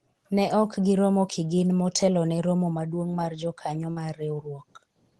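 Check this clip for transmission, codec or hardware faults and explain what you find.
One transmission fault is audible. From 3.91 to 3.99 s, the speech smears into a brief held, fading sound and then jumps ahead. This is a burst of packet loss: about 60 ms of audio never arrived, so the receiver stretched the last sound for roughly 54 ms, lowering it, before resuming later. The call codec's content stops near 12 kHz, consistent with Opus at a modest bitrate.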